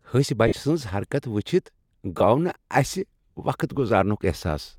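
At 0.48 s and again at 2.18 s the speech briefly smears into a hissy, grainy blur, about 45 ms and 22 ms long. These are lost LE Audio frames: the LC3 decoder concealed each gap by repeating the last spectrum with scrambled signs.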